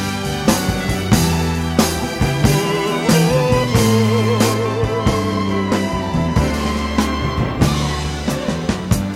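From 4.54 to 6.54 s, de-emphasis is applied wrongly: a treble cut with nothing to undo pulls 10 kHz down about 8 dB relative to 1 kHz, dulling the sound.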